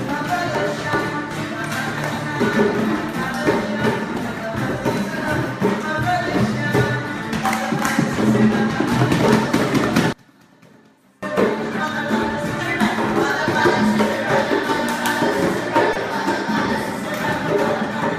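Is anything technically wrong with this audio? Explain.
Yes, there are two faults. From 10.13 to 11.23 s the sound nearly vanishes, dropping about 31 dB, likely one channel inverted cancelling the shared content in mono; unlike a dropout, faint residue remains. From 15.93 to 15.97 s, short concealed packet loss: about 20 ms went missing and was filled by extending the preceding sound, leaving a brief smear rather than a clean gap or click.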